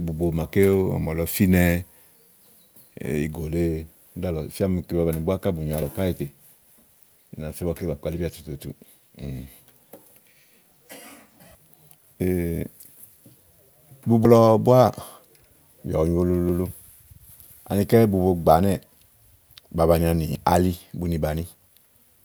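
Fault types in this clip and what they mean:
Dropped buffer (overrun): the speech skips forward at 5.82, 14.25, 16.49 and 20.35 s, losing roughly 20 ms twice and around 70 ms twice. Unlike a dropout, no silent gap appears, which likely points to samples overwritten before being read.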